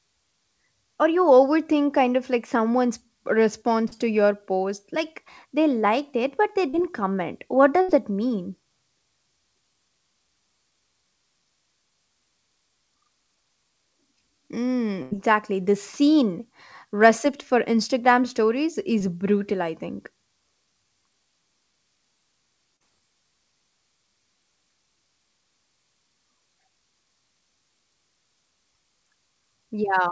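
Speech carried over a call link, with its bandwidth stopping at 8 kHz in a way that fits G.722 at 64 kbps, shows two kinds of packet-loss damage. Short concealed packet loss occurs at 3.88–3.93 s (just before "to your post"), 6.69–6.75 s (just after "liked it but they"), 18.99–19.02 s and 22.76–22.82 s. In each case about 40 ms of audio, and about 20 ms at 19.0 s, failed to reach the decoder in time. The receiver filled the gap by extending the preceding waveform, repeating its pitch period through voiced sound and substituting shaped noise elsewhere, then crossfaded back into the real signal. Each one is heard as a brief smear or wobble. A burst of packet loss appears at 7.81–7.90 s (just before "that mean") and at 15.02–15.13 s. Here roughly 80 ms of consecutive audio was lost. The concealment sustained the last sound while attenuating it, which produces a held buzz or fading hiss. Playback then resumes with that stretch of speech missing.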